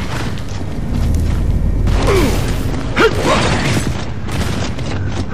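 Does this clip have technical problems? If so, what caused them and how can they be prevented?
Yes. Hard clipping from 2.98 to 3.87 s: overdriven by about 9 dB, peaks are cut flat, showing squared waveform tops and smeared high harmonics on a spectrogram. Prevent it by lowering input gain.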